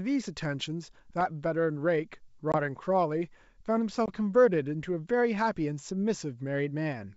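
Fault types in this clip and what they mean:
Block of digital silence: a 1.33 ms run of samples drops straight to silence with hard edges. At 1.21 s it sounds as a click.
Packet loss on an ADPCM call: about one 20 ms packet goes silent. The decoder's predictor falls out of step, so speech returns with brief distortion.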